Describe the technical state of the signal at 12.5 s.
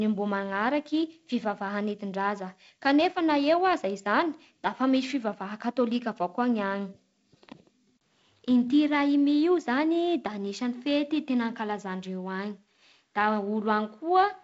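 At 12.5 s the speech is intact, carried by G.722 wideband telephone coding that leaves nothing above about 7.7 kHz and adds only its light coding hiss.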